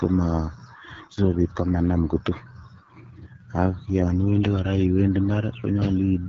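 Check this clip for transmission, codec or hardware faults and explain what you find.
The speech carries one fault from start to finish: AMR wideband (HD Voice) codec coding at a low rate. The model of the throat and mouth rebuilds everything up to 6.4 kHz from a few pulses, and the top band is filled with shaped noise, so the speech sounds rough and raspy, with plainly audible damage that fits a rate near 8.85 kbit/s. Unlike narrowband phone coding, the sound still reaches about 7.3 kHz, and nothing lies above that.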